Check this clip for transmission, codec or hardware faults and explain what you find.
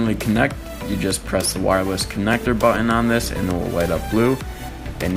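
I found no faults in this clip to explain.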